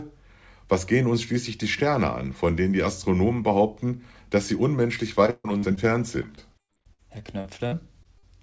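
Repeated packet loss hits twice, from 5.26 to 5.78 s and again from 6.22 to 8.25 s. Lost packets leave holes, patched by stretching the preceding sound. Gaps reach 140 ms in the first stretch, about 40% concealed, so it turns choppy and robotic. In the second, shorter dropouts recur throughout, through a band topping out at 8 kHz, which fits a wideband G.722-type codec.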